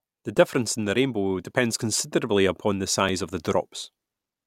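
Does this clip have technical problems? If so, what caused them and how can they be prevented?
Yes. A repeated buffer occurs at 0.37 s and again at 3.09 s. Each time a piece about 1.45 ms long, which fits a 64-sample buffer, plays twice more with hard joins, giving a brief click-buzz rather than a silent dropout, and nothing appears lost. A larger buffer or higher playback priority prevents it.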